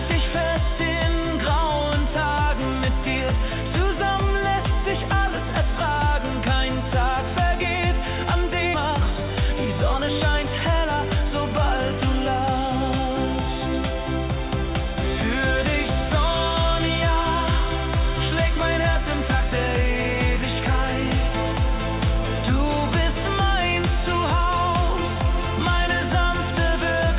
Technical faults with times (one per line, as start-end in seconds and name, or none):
8.74 skip ahead
8.86-10.45 jitter buffer speed-up